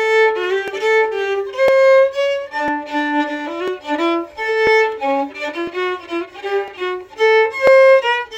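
From 0.68 s to 7.67 s the audio has periodic USB or driver dropouts, repeating about once every second. At each one, roughly a millisecond of signal is skipped outright, so the waveform jumps ahead and splices two non-matching points together. That discontinuity is heard as a short, regular tick or pop, present only where there is signal. The steady one-second spacing points to a background task that stalls the USB bus or audio driver on a fixed schedule.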